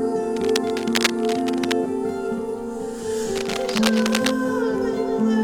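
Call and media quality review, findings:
Dense, uneven scratching and rustling over the music, 0.36–1.75 s and 3.36–4.32 s, only slightly below the music. Cable scratch noise, likely a worn cable, connector or control being moved, its contact resistance fluctuating rapidly and injecting noise bursts.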